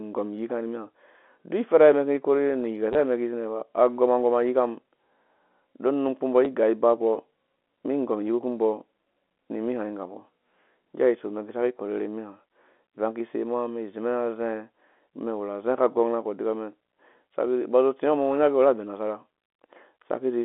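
At 2.93 to 2.95 s the speech briefly stutters. This is packet loss with the last packet repeated. About 20 ms of audio went missing, and the receiver filled the gap by replaying the previous chunk. The sound suggests two 10 ms packets. A second, shorter dropout comes at 6.45 s. It covers about 10 ms, and a small blip is heard. Both gaps pass through the telephone band of the G.711 line.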